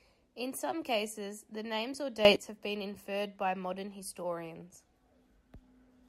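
Between 2.25 and 2.36 s, after "cases the names or", the speech and its background noise leap up together by about 12 dB: a sudden gain jump, likely from digital gain applied without a ramp.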